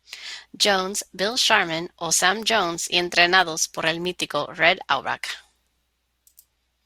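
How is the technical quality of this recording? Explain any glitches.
Not great: there's a periodic clock jitter problem running through the whole clip. The converter's sample clock is being wobbled at around 700 Hz, so every part of the speech picks up sidebands on either side at that spacing, strongest on the higher frequencies. That gives a rough, metallic edge that disappears in the pauses.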